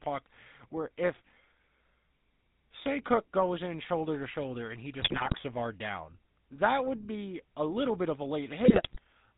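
The speech runs through the GSM full-rate codec throughout, with the buzzy, gravelly roughness of pulse-driven vocal-tract coding, which fits a 13 kbps full-rate stream; a spectrogram shows nothing above 4 kHz and a coarse, smeared harmonic structure. GSM bit errors break the voice into squawks and gargling from 5.02 to 5.39 s and from 8.64 to 8.99 s, where corrupted filter, pitch and gain values warp each frame. These appear as bent, blotchy spectral bands and sudden level jumps in the waveform.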